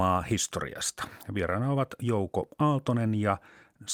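No technical faults can be heard anywhere in the speech recording, and the signal holds steady throughout without any break or disturbance.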